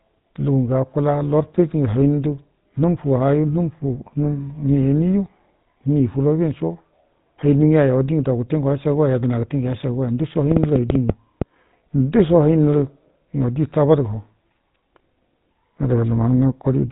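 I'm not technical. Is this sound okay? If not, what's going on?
No. The speech sounds buzzy and gravelly from start to finish, and thin, with nothing above about 3.8 kHz. That is GSM full-rate codec damage: an early mobile-phone codec rebuilds the voice from a simple model driven by regular pulses, which roughens it.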